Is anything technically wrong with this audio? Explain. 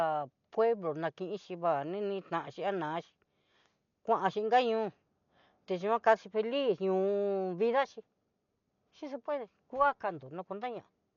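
Yes. Throughout, the speech is dull with nothing above 6.9 kHz, likely from Dolby Digital compression at a rate that points to about 48 kbps. Starved frequency lines refilled with dither noise add a rough flutter around tones, which a plain low-pass filter would not.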